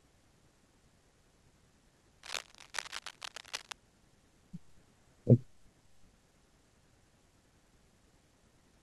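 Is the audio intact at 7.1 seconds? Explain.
Yes, at 7.1 seconds the audio is intact, with no dropout, click, distortion or other fault heard at that point.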